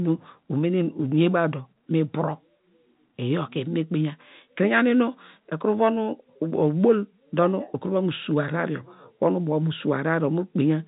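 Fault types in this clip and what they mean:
No faults are present.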